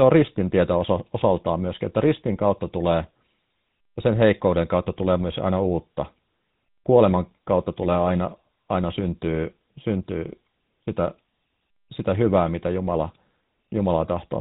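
From start to finish the speech carries plainly audible GSM full-rate codec damage. Nothing above 4 kHz survives, and the excitation is rebuilt from sparse, regularly spaced pulses, leaving a buzzy, gravelly roughness that is consistent with a bitrate of about 13 kbps.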